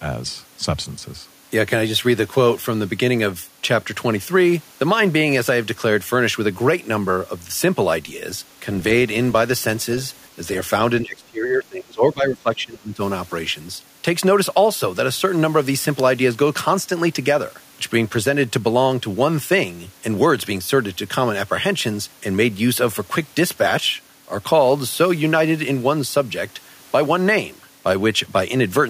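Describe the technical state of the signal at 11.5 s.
At 11.5 s the speech sits inside a stretch of speech suppressed in double talk, from 11.02 to 13.01 s, likely because an echo canceller mistook overlapping talk for its own loudspeaker echo and clamped the line. The speech dips sharply, by roughly 25 dB at worst, and thins or breaks up.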